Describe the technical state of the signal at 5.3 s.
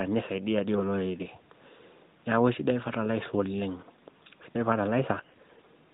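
AMR bit errors run from 5.18 to 5.69 s: around a tenth of the less-protected bits arrive flipped, misplacing excitation pulses so the speech turns hoarse and gargly. On a spectrogram the harmonics under the 4 kHz narrowband ceiling smear into noisy, broken texture while the waveform keeps its overall level.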